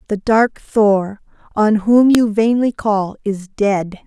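At 2.15 s, a file header played as audio: a second WAV piece was joined on without stripping its header, so those few dozen bytes of metadata were read as samples. The result is a single sharp, loud click in the speech, unrelated to what surrounds it.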